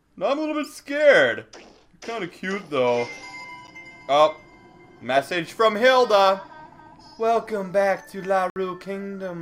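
The audio has two blocks of digital silence, where the signal drops straight to silence and returns with no fade. The first, at 3.67 s, lasts only about 9 ms, so it registers as a tick or brief dip, not as a gap. The second runs from 8.50 to 8.56 s, a 60 ms hole. Such blocks come from an output buffer that was not filled in time or from a calculation that produced invalid values.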